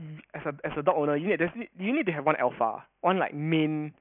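Aliasing runs through the whole speech clip: the audio was downsampled without an anti-alias filter, in a way that fits a drop from 16 kHz to 6 kHz. Content above 3 kHz folds back below it, leaving sibilants gritty and metallic, roughly 20 dB under the speech.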